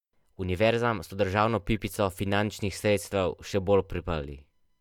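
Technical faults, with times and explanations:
1.80 s, corrupt frame decoded. Right after "so državno" there is a tiny, faint blip in the speech. Bits inside a compressed frame were damaged, but the decoder played that frame anyway. Misread codes and gains put energy at the wrong frequencies for a very short moment. The sound points to only a few frames being hit. The stray energy sits at a very low level, around -50 dBFS, so it passes as a small tick.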